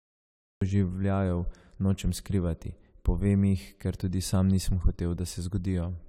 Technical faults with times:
0.00-0.61 cut-off start

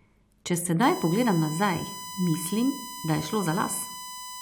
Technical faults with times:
0.82-4.42 USB whine

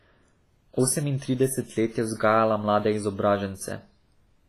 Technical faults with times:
0.00-4.49 WMA compression

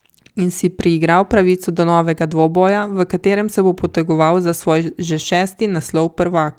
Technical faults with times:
none

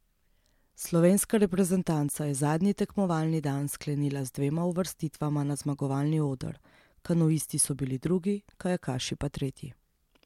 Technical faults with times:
none

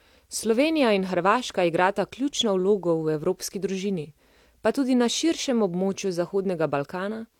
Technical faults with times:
0.00-7.39 low-bitrate audio saved at a high bitrate

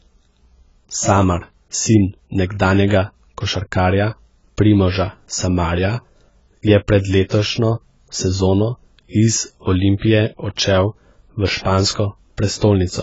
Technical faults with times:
0.00-13.02 AAC compression
9.99-10.02 pre-echo

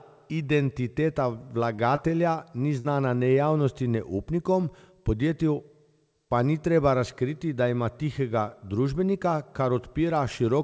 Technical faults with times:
1.76-2.00 short concealed packet loss
2.80-2.86 burst of packet loss

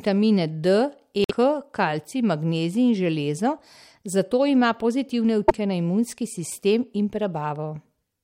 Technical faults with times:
1.24-1.31 broken MP3 bit reservoir
5.47-5.52 broken MP3 bit reservoir

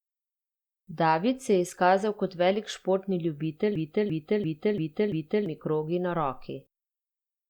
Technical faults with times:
3.75-5.46 system hang loop

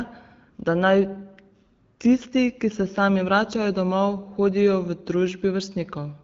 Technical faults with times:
none

